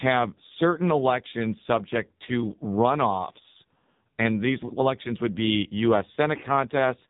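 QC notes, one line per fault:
Throughout: AMR narrowband mobile codec (AMR-NB). The speech has nothing above 3.8 kHz, and heavy damage leaves it buzzy and synthetic, because each 20 ms frame is rebuilt from a vocal-tract model and a few pulses. The coarseness fits a low mode near 5.9 kbps.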